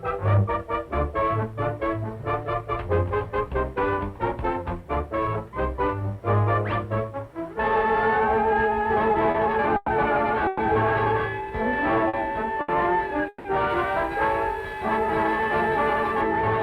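At 9.31 s there is a short stall from a late packet. A packet arrived late and the jitter buffer ran dry. The receiver held the last sound for about 30 ms, then carried on from the same point. Nothing is lost. The sound just hangs briefly with a slight buzz or dip.

At 9.76 s a call audio freeze begins and lasts to 9.90 s. The last sound is drawn out as a fading buzz or hiss for about 110 ms. Packets were likely held up in transit, emptying the buffer. The audio then resumes where it stopped, so the gap is inserted rather than cut out.

A second freeze runs from 10.47 s to 10.61 s. It is the same kind of event, again about 110 ms of stretched, fading tone.

Two more short stalls follow, at 12.08 s and 12.61 s. They hold the sound for about 50 ms and 70 ms. Each one sounds like a small catch in the flow.

The longest freeze runs from 13.28 s to 13.47 s. About 160 ms is filled. The fill decays to a brief moment of silence before playback picks up. 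All three freezes add delay without removing any audio.

From 13.7 s to 16.2 s, pre-emphasis is left on. The treble boost follows the CD 50/15 µs curve, and the matching de-emphasis was never applied. The top end sits about 8 dB too high at 10 kHz relative to 1 kHz. The sound turns thin, bright and hissy, and sibilance is exaggerated.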